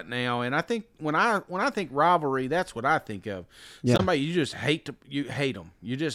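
At 3.96 to 4.00 s, just before "you just hate to", damaged data in a compressed stream makes the decoder misread frames, giving a brief glitch.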